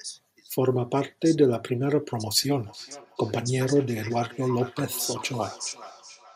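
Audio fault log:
2.66 s to the end, feedback echo between two devices: the speech returns as a delayed copy roughly 0.4 s behind the original, peaking about 20 dB below it, heard as a faint trailing repeat of each phrase. A second device in the same room is likely on the call and playing this microphone's signal aloud; the microphone picks that playback up again, and its echo canceller cannot remove sound played by another device.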